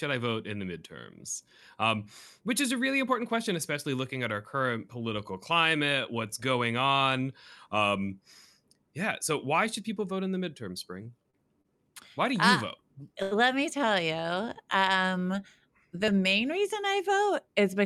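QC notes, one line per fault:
11.03–11.67 s, repeated stalls (stutter): just after "vote in the midterm", the jitter buffer ran dry four times as packets arrived late. The receiver extended the previous sound across each gap, 92 ms in total and at most 31 ms each, so delivery drags and stutters while nothing is lost.
13.23–13.33 s, short stall from a late packet: one packet turned up 88 ms behind schedule, emptying the jitter buffer. The last sound was stretched for 88 ms until it arrived, then playback resumed at the same point, giving a held sound with a slight buzz or dip but no lost audio.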